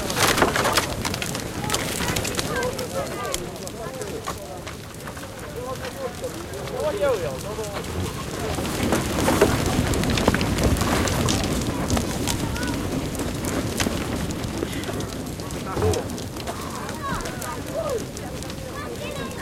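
There are no technical faults to describe at any point in this recording of everyday sounds.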